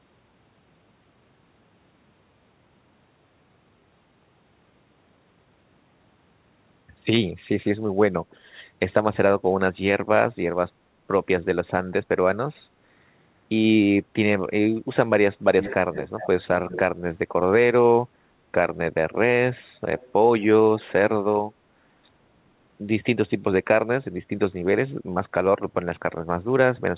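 From 15.6 to 16.8 s, a delayed copy of the speech returns in three scraps, at 15.6, 15.93 to 16.43 and 16.69 s. It trails by 360 ms, fairly loud at first. A faint copy recurs at 19.98 s, 436 ms late. This is an echo leak, likely from a loudspeaker echo canceller letting sound through.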